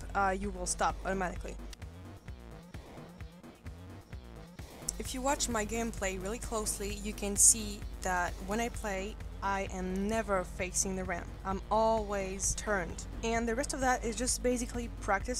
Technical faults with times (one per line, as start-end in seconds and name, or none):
4.62-8.95 pre-emphasis left on